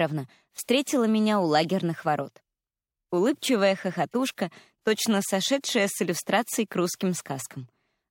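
Two brief blips break through the audio, a fairly prominent chirp from 1.62 to 1.65 s and a much fainter one at 4.12 s. Each is a corrupt frame decoded: flipped bits in what sounds like a single compressed frame were played anyway, misplacing energy in frequency.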